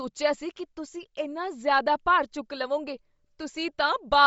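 Throughout, the speech has a grainy, breathy top end where the upper frequencies are replaced by noise fill. This is likely Bluetooth LC3 compression, and the damage fits a low rate around 32 kbps.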